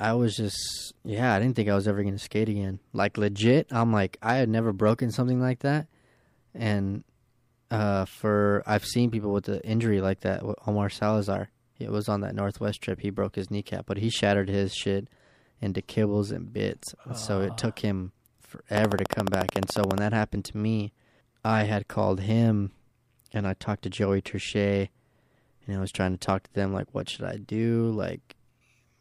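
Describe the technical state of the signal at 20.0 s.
A train of clicks runs from 18.77 to 19.99 s: about twenty regular ticks at 14.1 per second, peaking about 15 dB above the speech, likely from interference. They show as evenly spaced vertical spectrogram stripes.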